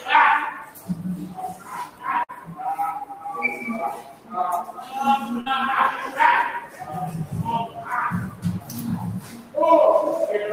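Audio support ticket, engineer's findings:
Speech-tuned noise suppressor active on non-speech sound, whole clip. Steady content and decays treated as noise and pulled down, level swinging around 15 dB. Onsets pass, sustained parts and tails sink, giving audible pumping and thinning throughout.

Sound cut by the noise suppressor at 0.59–3.25 s, 3.94–4.93 s, 6.60–6.86 s and 7.67–9.56 s. Held or fading sound dropped by up to about 12, 13, 10 and 13 dB respectively. Decays truncated while sharp transients survive. The suppressor's gain is misreading the source as noise.

Burst of packet loss at 2.23–2.32 s and 5.41–5.49 s. The receiver's concealment extends the preceding sound for about 50 ms, fading it out. Playback resumes roughly 60 ms further on, with that stretch of audio skipped.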